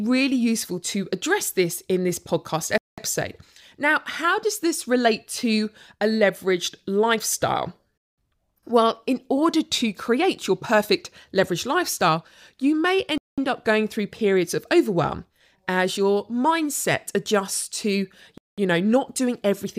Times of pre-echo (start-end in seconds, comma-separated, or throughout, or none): none